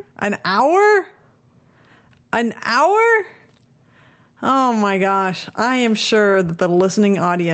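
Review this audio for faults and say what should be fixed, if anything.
The whole clip has gain pumping. The gain swings by something like 15 dB. Loud and quiet passages end up squashed close together. The likely cause is input gain set far too high, with a fast limiter or compressor clamping down on each peak. The call path's band limit, with the top end stopping near 8 kHz, is a separate thing from the pumping. To fix it, turn the mic gain down so the limiter rarely has to act, or slow its attack and release.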